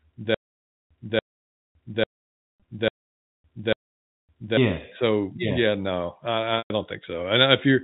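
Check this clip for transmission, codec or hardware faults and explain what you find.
Yes, there are two kinds of fault: a stall-and-repeat stutter early on, and two patches of packet loss concealed by pitch repetition. The telephone coding itself sounds as expected, with everything above 4 kHz cut away.

Stutter with silent gaps runs from 0.34 s to 4.57 s. A 284 ms fragment of speech comes back five times, each followed by about 562 ms of dead silence, so the burst returns every 846 ms. That pattern likely comes from the player or stream stalling: each retry replays the last buffered chunk, then runs dry. Whatever speech belonged in those gaps is gone.

Packet loss with pitch repetition shows up at 2.60 s and again from 6.58 s to 6.70 s. At 2.60 s about 220 ms went missing, spread over 400 ms, with the longest single run at 80 ms. The second event loses about 120 ms. In both cases the receiver fills the hole by repeating the last pitch period and fading it out over about 50 ms.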